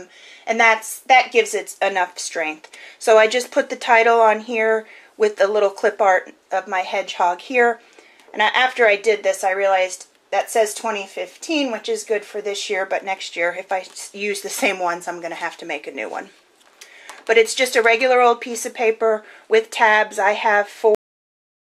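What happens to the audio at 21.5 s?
At 21.5 s the audio is digital silence, part of a cut-off end that begins at 20.95 s and runs to the close. The final buffers were never written, so sound stops mid-event with no decay: a flat waveform and a blank spectrogram after a sharp vertical edge.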